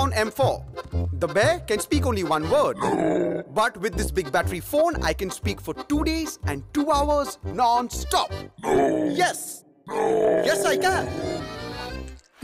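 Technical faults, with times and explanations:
No technical faults detected anywhere in the audio.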